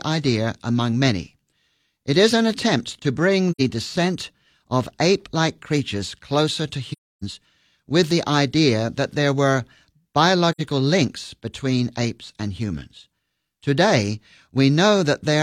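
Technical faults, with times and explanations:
3.51–3.61 s, 6.92–7.23 s and 10.52–10.61 s: AAC frame loss with muting. The sound fades into silence after "an attempt to bring" and before "descent of ape like", again after "like creatures closer to", and before "links between apes and". The holes last about 85 ms, 300 ms and 85 ms, which fits two, seven and two lost frames. The decoder zeroed the missing spectra, and the overlapping transform windows taper each edge. Unlike a hard dropout, the edges are soft.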